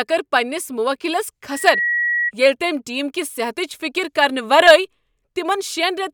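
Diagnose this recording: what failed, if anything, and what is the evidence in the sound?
Loudspeaker feedback squeal at playback: from 1.5 to 2.31 s, loop gain above one at 1.9 kHz quickly swells a tone to speech level, a lone horizontal spectrogram line.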